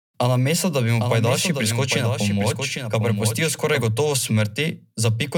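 From 1.00 to 3.84 s, a doubled audio track. A dry copy, about 5 dB quieter, trails about 0.7 s behind, likely from a slower second capture path.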